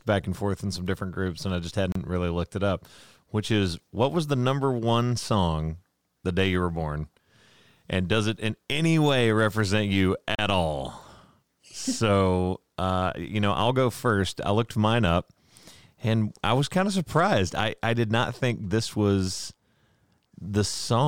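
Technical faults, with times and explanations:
1.92–1.96 s and 10.35–10.39 s, Bluetooth stall: the speech drops to dead silence for about 32 ms and then 36 ms, and each time resumes abruptly with no fade on either edge. The likely cause is radio interference delaying packets on the wireless link, so the headphones' playback buffer emptied and output halted until retransmitted packets arrived. The hard edges reflect playback simply stopping and restarting rather than any gain change.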